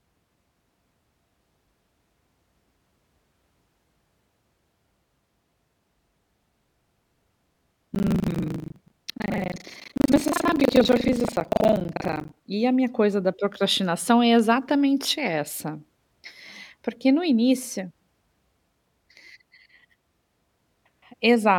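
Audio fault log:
6.4–12.42 s, buffer tearing: a robotic rattle at 25 Hz runs through the speech until just before "e a minha coisa". The writer and reader of the ring buffer have slipped, so roughly half of each buffer replays audio about a tenth of a second old, hard-joined on both sides.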